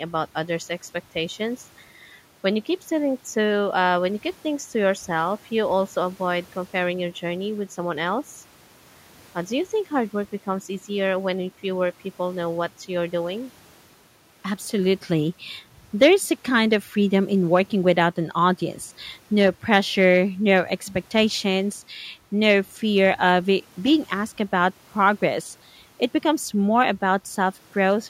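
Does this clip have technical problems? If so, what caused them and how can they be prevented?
No, this clip has no technical problems, so there is nothing to trace to a cause or prevent.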